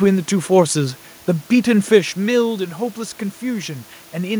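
No technical faults are audible.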